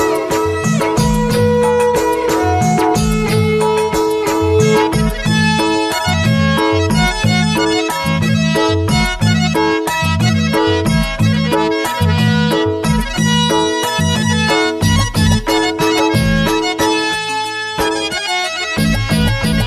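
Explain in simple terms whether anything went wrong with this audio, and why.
Nothing went wrong; no faults can be heard here.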